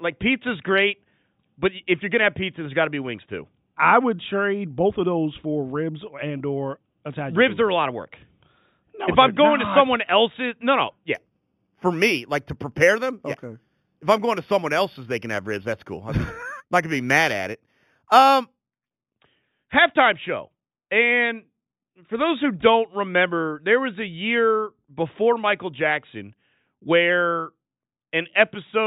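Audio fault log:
11.15–19.15 s, imaging from linear upsampling: after "else's no no yeah" and until "halftime show and", the speech loses its top end. A faint metallic shimmer rides on the sibilants, about 20 dB under the voice. The dulling fits audio at an 8 kHz rate being raised to 44.1 kHz by straight-line interpolation. That weak filter leaves mirrored copies of the 0–4 kHz band sitting at 4–8 kHz. Simple band-limiting would only dull the sound, with no shimmer.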